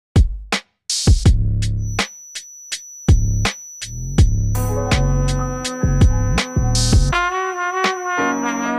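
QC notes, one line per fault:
1.76 s to the end, feedback whistle: a thin 5.9 kHz tone wavers about 20 dB under the sound, likely a speaker-to-mic loop sitting right at the edge of feedback.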